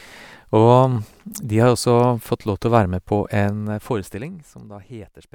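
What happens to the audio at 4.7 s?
At 4.7 s the speech carries a rapid ticking, zipper noise that runs from 3.41 to 4.91 s. The level falls by about 20 dB in unsmoothed 1 dB steps, roughly twenty per second, and each jump leaves a small click on the sound.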